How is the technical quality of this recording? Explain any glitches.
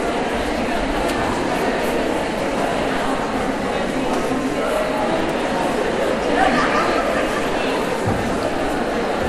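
The recording carries one fault, sample clock jitter, present for the whole clip. The converter's clock wanders by a few microseconds, so each sample is taken slightly early or late. The error grows with waveform slope, leaving a faint roughness around 35 dB below the signal. Unlike a steady noise floor, it swells on loud, bright sounds and disappears in silence.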